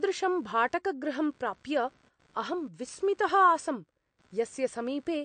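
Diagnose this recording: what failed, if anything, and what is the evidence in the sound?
Computer activity noise is present throughout, an analogue wiring fault. Under the speech runs a faint buzzing chirp at roughly 70 pulses per second, sitting about 40 dB below the signal. It follows the computer's processor, graphics or mouse load pulling on a shared ground, not the talker, so its texture changes independently of the speech. That sets it apart from steady mains hum, which holds a fixed 50 or 60 Hz tone and never chirps.

The codec stage shows plainly audible damage throughout, most likely MP3 compression. Nothing is present above 9 kHz, where the encoder has cut the treble at a fixed point, and weak frequency lines switch on and off from frame to frame, giving the speech a watery, swirly quality with metallic edges on s sounds and smeared consonant attacks. The hard ceiling and swirl point to a low bitrate, something like 48 kbps, rather than simple low-pass filtering, which would dull the sound without the swirl.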